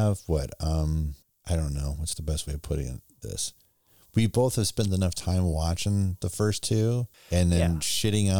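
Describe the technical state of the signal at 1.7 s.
At 1.7 s the speech signal is intact, with no technical fault present at that moment.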